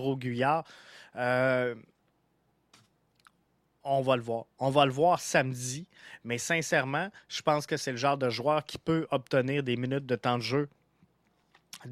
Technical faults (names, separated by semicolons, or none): none